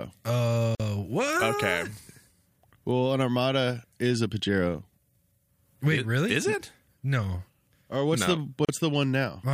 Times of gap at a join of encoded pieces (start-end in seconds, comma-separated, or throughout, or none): 0.75-0.80, 8.65-8.69